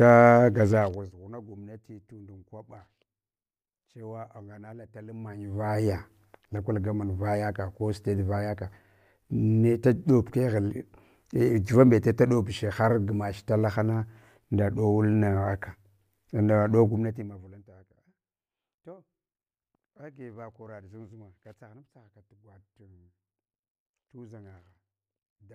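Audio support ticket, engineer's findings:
No faults found on the speech; the level changes are smooth and fader-like.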